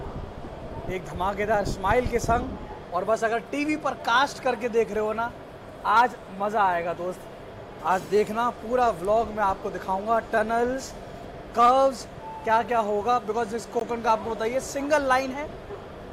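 At 13.8 s a brief gap at a join of encoded pieces cuts the sound for about 17 ms. Separately encoded segments were joined with their encoder delay and end padding left in. It is heard as a tiny dropout, and a waveform or spectrogram shows a thin, nearly vertical blank band with slightly smeared edges.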